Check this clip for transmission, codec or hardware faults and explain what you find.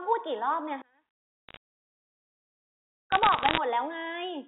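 There are two problems in this speech clip: a big level collapse in the first half and two patches of crackle. It's carried over a G.711 mu-law phone line, which you can hear in the narrow band of roughly 200 Hz to 3.7 kHz.

From 0.82 to 2.47 s the speech nearly disappears, dropping by about 33 dB. That's likely one channel inverted: with one stereo side's polarity reversed, everything common to both cancels when they're summed to mono, leaving only a faint residue.

Bit errors on a digital phone line show up at 1.49 to 1.57 s and again, more heavily, at 3.12 to 3.58 s, with error rates of a fraction of a percent. Each flipped bit corrupts a single sample, so hits on high-order bits become sharp ticks, heard here as bursts of crackle over the speech.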